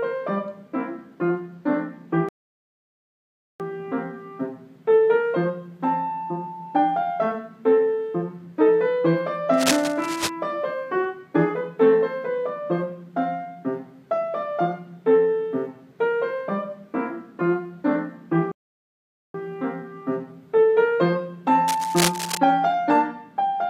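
At 2.29 s the sound drops to silence for 1.31 s, picking up again at 3.60 s. That's a playback stall, likely the player running dry or getting blocked. Between 9.54 and 10.30 s, dense, ragged scratching sits just under the level of the sound. That's cable scratch noise, likely a worn lead or connector being moved. A second stall leaves a 0.83 s gap from 18.52 to 19.34 s, and the scratching comes back from 21.68 to 22.38 s.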